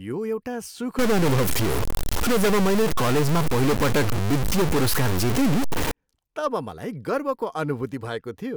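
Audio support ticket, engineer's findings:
Stuck bit, 0.99–5.91 s, starting after "यो एउटा" and clearing before "तब मलाई गर्वको". Likely a converter or data-line fault holding one bit fixed, weight near -20 dBFS. Roughly half the samples are offset by that step, in a pattern that follows the waveform. The result is harsh, buzzy distortion on the speech. Pauses fill with loud noise as small values flip sign.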